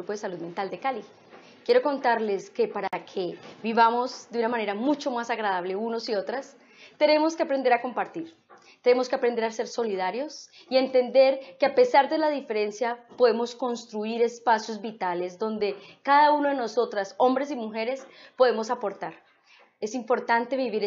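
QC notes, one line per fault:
2.88–2.93 s, gap at a join of encoded pieces: a gap of about 52 ms cuts into continuous sound, with edges smeared by the codec so the truly silent part is shorter. Two separately encoded segments meet here, and the start-up delay of one and the padded final frame of the other were never trimmed. Unlike a dropout, nothing is lost: the sound resumes exactly where it stopped, so the gap only inserts time.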